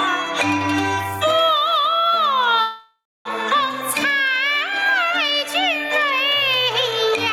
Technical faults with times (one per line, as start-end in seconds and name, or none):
0.00-7.33 gain pumping
2.61-3.27 long network dropout
3.55-4.85 jitter buffer speed-up
5.28-5.62 jitter buffer speed-up